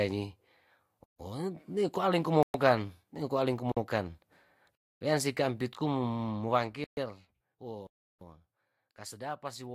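At 1.04, 2.43, 3.72, 4.75, 6.84 and 7.87 s the speech drops into blocks of digital silence lasting 153, 114, 48, 256, 131 and 341 ms. The fourth ends just before "weansi kampit kum", and the last fits a 16384-sample buffer left unfilled. Each block cuts abruptly to silence and back with no fade. In the waveform these are flat-line gaps, and in the spectrogram they show as empty vertical bands.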